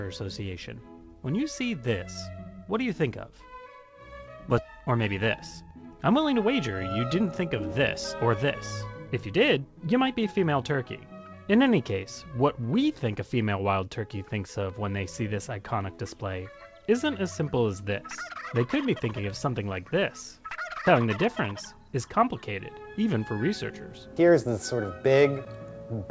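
At 4.58 to 4.60 s the audio jumps forward with no gap: about a second of material is simply missing, and the two sides are butted together. This is a skip ahead. The stretch was dropped while later audio was already waiting, cutting the delay by roughly a second.

Right after, from 4.68 to 7.81 s, the sound runs fast at unchanged pitch, at 107% speed. It does so again from 8.25 to 8.46 s at 115% and from 9.07 to 10.72 s at 112%. These are jitter buffer speed-ups. The receiver held more audio than it wanted, so it repeatedly cut out short pitch-period pieces, roughly 200 ms, 40 ms and 200 ms in the three stretches. The G.722 call path carries nothing above 8 kHz.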